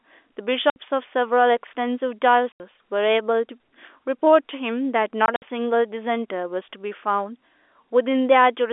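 At 0.70 to 0.76 s, 2.52 to 2.60 s and 5.26 to 5.42 s the speech drops into dead silence: packet loss filled with silence. The holes last 60 and 80 ms, which fits 20 ms packets, and the third scatters 80 ms of gaps over 160 ms. Each hole has hard edges. Unlike concealment, which smears or repeats the last sound, nothing fills these holes. The band stays limited to the 300 to 3500 Hz telephone range throughout.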